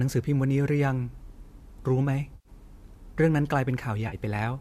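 A smeared, phasey patch fills about 100 ms from 2.35 to 2.49 s, and a shorter 40 ms one follows at 4.08 to 4.15 s. This is AAC frame loss with concealment: the decoder, likely running low-delay AAC, patched the missing frames from the last good spectrum.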